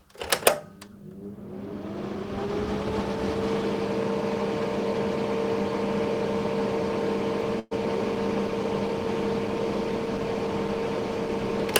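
At 7.59 s a burst of packet loss begins, lasting until 7.73 s. About 120 ms of audio was lost or arrived too late to be played. The receiver stretched the last sound across 116 ms, letting it fade. A 10 ms silence follows, then the sound resumes further on.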